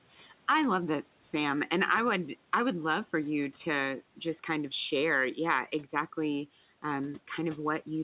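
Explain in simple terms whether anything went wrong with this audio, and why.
Something did go wrong, right at the start. Between 0.17 and 0.32 seconds, the speech is cut by the noise suppressor. That tool is meant to remove background hiss. Here it mistook a bit of speech for noise and turned it down too. In total, about a tenth of a second is affected. The sound there seems swallowed and quieter than the speech around it. Some room noise can be heard underneath. The call line carries nothing above 4 kHz, which fits a standard telephone codec.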